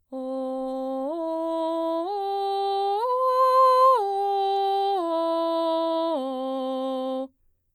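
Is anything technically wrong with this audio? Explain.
No, nothing technically wrong can be heard in this music clip. No faults turn up anywhere in the recording.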